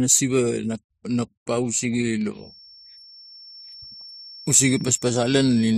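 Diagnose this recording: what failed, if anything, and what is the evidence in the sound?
Feedback whistle from 2.31 s to the end of the clip, entering just after "nap no pausege". A thin, steady tone at 5.4 kHz sits well below the speech, roughly 25 dB down, and swells and fades slowly in level. The stage is the analogue acoustic path. The likely cause is a loudspeaker-to-microphone loop held right at the edge of feedback, so that single high frequency keeps ringing without growing into a runaway howl.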